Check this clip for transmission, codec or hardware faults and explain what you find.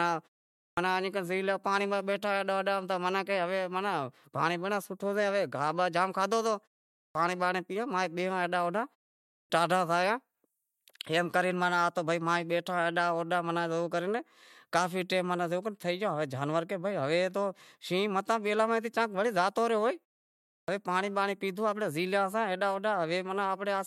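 There's one fault here: clipped start after a pause, happening four times. At 0.57 s, 6.95 s, 9.30 s and 20.51 s, the speech resumes after a short gap of roughly 0.36 to 0.54 s, and its opening is missing: about 200 ms in the first three cases, about 170 ms at 20.51 s. The output device drops into a low-power or unlocked state during the silence and takes that long to come back, so the first sounds of each phrase never make it out. You hear the speech jump in abruptly out of silence.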